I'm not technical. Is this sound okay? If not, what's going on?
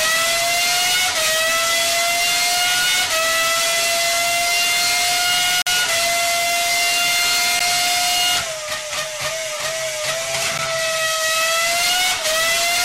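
No, there's a block of digital silence: the sound drops out briefly at 5.62 s (about 46 ms, a short hole) and ticks at 7.59 s and 10.58 s, likely from the computer not filling its audio buffer in time.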